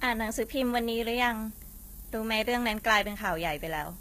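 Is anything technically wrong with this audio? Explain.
Yes, two faults run through the whole of this speech clip.

The first is low bit depth with noise shaping. A steady, thin hiss sits only about 15 dB below the speech and climbs sharply toward the treble, which fits a signal held to roughly 7 bits. The rounding error has been pushed upward in frequency rather than left flat. Plain low bit depth without shaping gives a broader, grittier noise that clings to the signal. Here the noise stays even and bright.

The second is plainly audible codec damage, most likely from HE-AAC compression at a bitrate around 20 kbps. Nothing reaches above 14.9 kHz. Below that, the treble sounds bright but synthetic: s sounds come out gritty, metallic or lispy, and the upper harmonics don't line up with the lower ones. That points to the top band being rebuilt by copying lower bands upward, not coded directly. 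A simple low-pass or ordinary MP3 loss would dull the treble rather than fake it.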